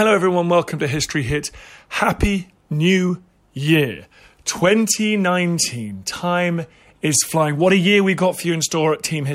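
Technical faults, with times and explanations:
Nothing in this speech recording stands out as a technical fault, so there's nothing to list here.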